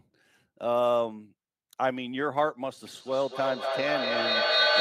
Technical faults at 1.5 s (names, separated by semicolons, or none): none